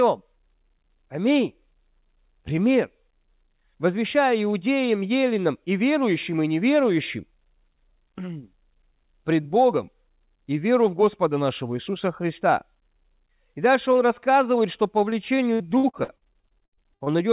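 Right after "он рассказывает что по", from about 15.1 s to 17.08 s, you get repeated packet loss and that robotic sound. Packets keep going missing, and each hole is bridged by stretching the last bit of audio, so you hear around 17 short dropouts, the longest about 68 ms. Roughly a quarter of that stretch is concealed filler, which is where the choppy, robotic texture comes from. The whole clip has the call path's bandwidth limit, with nothing above 4 kHz, which fits a narrowband G.711 link.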